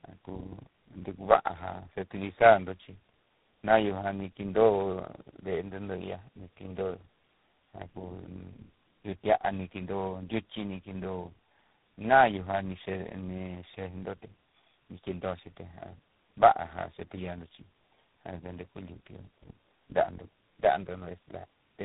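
Tandem speech coding runs through the whole clip: the speech sounds like it passed through about three low-rate speech codecs in a row, each re-coding the last one's errors, so it turns rough, warbly and muffled, with nothing above 3.8 kHz.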